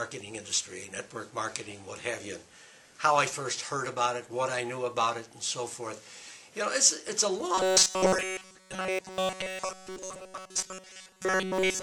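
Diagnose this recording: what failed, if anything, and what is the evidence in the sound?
Robotic sound from repeated short buffers runs from 7.54 s to the end of the clip at 11.83 s. Through that stretch, essentially all of the audio becomes a rigid, metallic buzz locked at 188 Hz. That pitch implies a loop of about 5.3 ms. The likely cause is at the driver or buffer stage: fresh audio stopped arriving in time, so the last short block was replayed while the real signal was skipped.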